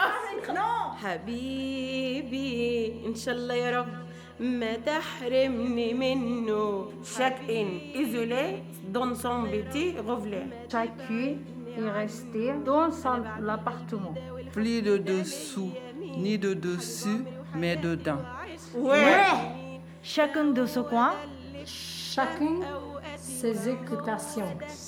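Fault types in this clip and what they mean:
USB whine: Current drawn in 1 ms USB frames leaks into the audio through power or ground, leaving a fixed-pitch whine from 0.43 s to the end, about 45 dB below the signal. On a spectrogram it forms steady horizontal lines at 1 kHz and multiples, brightest at 10 kHz.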